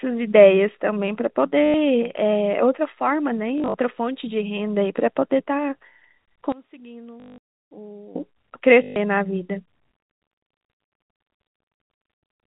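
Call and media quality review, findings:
Packet loss with last packet repeated: lost packets concealed by replaying the previous one at 1.66–1.74 s (80 ms), 3.58–3.74 s (scattered), 7.2–7.38 s (180 ms) and 8.84–8.96 s (120 ms). A 50 Hz robotic stutter, which fits 20 ms packets.

One channel inverted, 6.52–8.16 s: level drops by about 21 dB and the speech drops to a faint residue, likely from reversed polarity on one stereo channel cancelling common content in the mono sum. G.711 band-limiting audible throughout.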